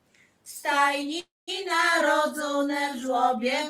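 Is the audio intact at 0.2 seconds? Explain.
Yes, at 0.2 seconds the audio is intact, with no dropout, click, distortion or other fault audible at that point.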